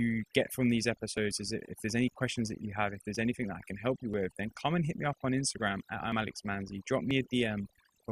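A noise reduction stage set far too strong runs through the whole speech clip, cutting individual frequency bands whenever they sit near its noise estimate. The result is overdone noise removal: near-silent gaps flecked with twinkling specks.

Segment time stamps that overlap make the player discard 6 to 16 milliseconds of real audio at each 1-second boundary, an overlap between stream segments. Tiny clicks or skips land at 1.17, 2.16, 3.15, 4.14, 5.13, 6.12 and 7.11 s, roughly once per second.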